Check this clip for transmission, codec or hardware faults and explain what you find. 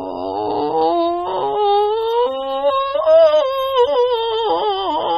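The music carries AAC compression damage for its whole length. It sounds dull and smeared, with a warbling, fizzy texture on sustained tones. The likely cause is AAC-LC coding at a low rate, which fits a bitrate near 27 kbps. Nothing survives above 16.4 kHz. On a spectrogram that shows as a hard ceiling.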